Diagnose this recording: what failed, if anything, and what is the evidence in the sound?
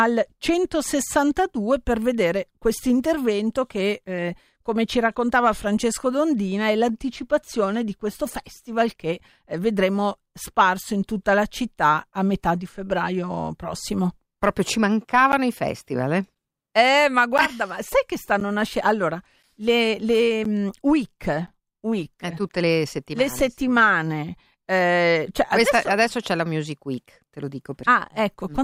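Regular ticks every 1.024 s from 15.32 to 22.50 s, each a short gap of silence in the speech, point to periodic USB or driver dropouts at the driver stage.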